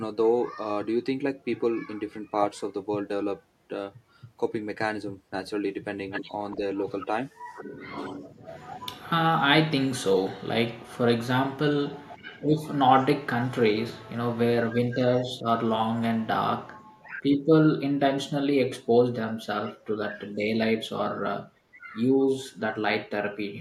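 An echo canceller that likely could not separate its own talker from loudspeaker echo causes speech suppressed in double talk at 6.53 to 6.61 s (a slight dip), 11.96 to 12.24 s, 14.66 to 15.09 s (the deepest, a cut of some 25 dB) and 16.99 to 17.08 s, so the speech dips. At 12.24 to 12.55 s, an echo leak, likely from a loudspeaker whose canceller let part of its microphone pickup through, returns a faint copy of the speech 367 ms late, about 30 dB below it.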